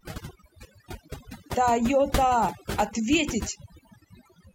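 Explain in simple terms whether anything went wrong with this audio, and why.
Yes, the whole clip has overdone noise removal: the cleanup was set too hard, so quiet bits of speech vanish, leaving twinkly near-silence between.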